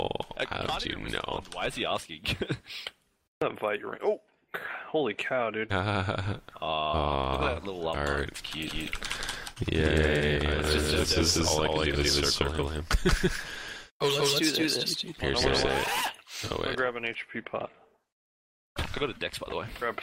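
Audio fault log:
8.67–16.01 s, doubled audio track: a copy about as loud trails roughly 200 ms behind, likely a second capture path or misaligned edit; unlike echo, it has no decay and starts abruptly.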